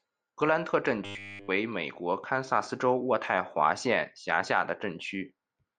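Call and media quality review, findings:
Robotic sound from repeated short buffers, 1.05–1.49 s: speech collapses into a rigid metallic buzz at 100 Hz. Likely cause is playout underrun: a segment of about 10 ms is replayed across essentially the whole span while the real audio is skipped.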